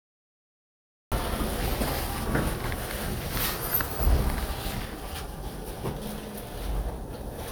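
Capture began late, producing a cut-off start: the first 1.12 s are digital silence, and at 1.12 s the sound switches on abruptly partway through an event, with no natural attack or fade-in, as though joined mid-stream.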